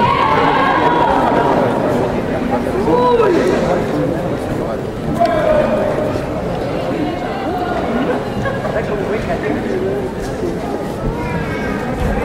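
From 2.54 to 3.76 s the loudest moments turn gritty, with a brittle crackle riding on each peak, and the same roughness returns more briefly from 5.21 to 5.82 s. This is hard clipping. The signal was driven about 4 dB, then about 3 dB, beyond what a stage in the chain could pass, so the peaks were sheared flat. Those flattened tops generate harmonics high in the spectrum, heard as the added crackle.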